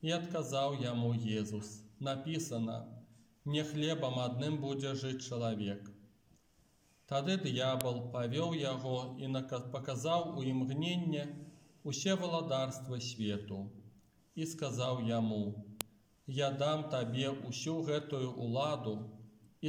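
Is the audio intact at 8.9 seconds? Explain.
Yes, at 8.9 seconds the audio is intact, with no dropout, click, distortion or other fault at that moment.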